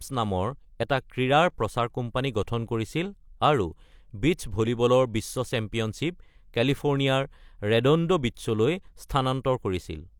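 No technical faults can be heard anywhere in the speech. There are no events to place on the timeline.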